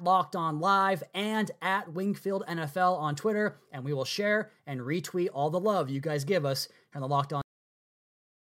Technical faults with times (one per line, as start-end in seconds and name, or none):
7.41-8.51 cut-off end